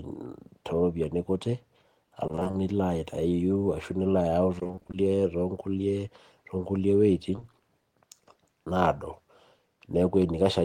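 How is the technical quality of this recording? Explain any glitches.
The recording has two kinds of transmission glitch, both from audio data failing to arrive in time.

Repeated packet loss (robotic sound) hits from 2.27 to 2.55 s and again from 4.59 to 4.95 s. Short gaps of up to 20 ms recur so often that about half of each stretch is patched by extending the previous sound, giving a choppy speech texture with pieces missing. A spectrogram shows smeared, repeated harmonic blocks alternating with real detail.

Short concealed packet loss occurs at 7.35 to 7.39 s and immediately after, at 7.39 to 7.43 s. About 20 ms is missing in each, filled by continuing the preceding sound and then blended back. It is heard as a brief smear or wobble, and it appears as a small flattened, stretched patch in the waveform.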